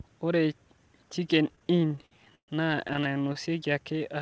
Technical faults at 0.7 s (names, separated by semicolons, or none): none